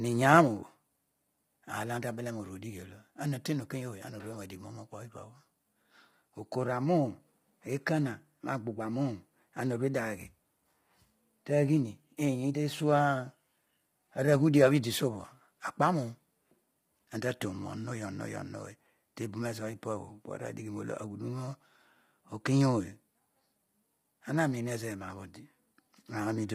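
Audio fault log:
Throughout: low-delay AAC compression. The speech sounds rough and grainy, with a noisy haze filling the gaps between the pitch harmonics and heavy coding damage across the clip, although content reaches up to about 23.4 kHz. The likely cause is AAC-ELD, the low-delay AAC used for video calls, at a bitrate that fits 24 kbps. Its very short frames resolve voice harmonics poorly and spend bits fast, so at this rate the gaps fill with quantisation noise.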